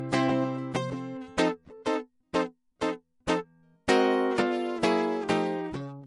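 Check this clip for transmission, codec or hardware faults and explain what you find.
One codec fault runs through the whole music clip.

Low-bitrate audio saved at a high bitrate, present throughout: nothing reaches above 11.3 kHz, so the top of the mix sounds dull. The likely cause is MP3 material first encoded at a low rate, around 48 kbit/s, then re-encoded at about 192 kbit/s. The second pass keeps the first encoder's losses intact, including that hard ceiling, because a bigger file cannot restore detail already discarded.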